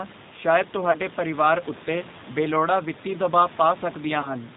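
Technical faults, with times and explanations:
Throughout, G.729 codec: the speech is squeezed to 8 kbit/s and rebuilt from a filter plus a few pulses, so it's band-limited below 4 kHz and plainly rough, slightly synthetic.
0.91 to 0.98 s and 4.21 to 4.36 s, VoIP packet loss concealed by the speech codec: about 30 ms of audio went missing each time, and the decoder stretched the previous sound into a fading buzzy tone or coloured noise, leaving things weak afterwards.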